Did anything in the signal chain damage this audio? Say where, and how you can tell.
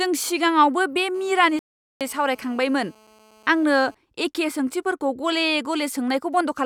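Yes. The GSM phone buzz sits in the analogue wiring. From 1.15 s, just after "सिगाङावबो बे", to 3.95 s, just before "एखे सोंथिफोरखौ", a raspy 217 Hz buzz with dense harmonics runs at about 31 dB below the speech. Its steadiness fits a phone on a call. The audio circuit rectified its radio bursts.

A playback stall breaks the speech from 1.59 s to 2.01 s. The output drops to silence for about 417 ms, inside the buzz. Then the sound resumes. The likely cause is the player running short of data or its output thread being blocked.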